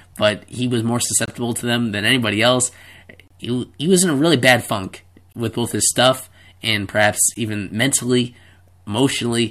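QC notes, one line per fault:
1.26–1.28 s, 3.28–3.31 s, 5.33–5.35 s and 7.34 s, gap between stream segments: short, hard-edged dropouts to silence of 23, 29, 22 and 16 ms, one about every 2 s, after "but he was more", "them than anybody else" and "a really bad funk". Each fits a 2-second segment boundary where timestamps leave a small hole that playback fills with silence. The speech resumes intact, with nothing missing.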